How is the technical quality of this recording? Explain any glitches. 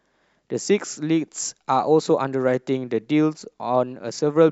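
No glitches or technical faults can be heard anywhere.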